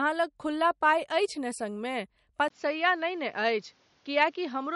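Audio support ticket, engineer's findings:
Speech, whole clip: watery, swirly top end, smeared s sounds, nothing above 11.2 kHz. Likely MP3 compression at a low bitrate, around 49 kbps. Encoder cuts treble and drops weak frequency lines frame to frame.

From 2.48 s to end: 20 ms gap, then dull, boxy tone, nothing above 7.2 kHz, new faint background noise well below the speech, level unchanged. Input switched to a poorer device, likely. Narrower-band microphone or headset call profile.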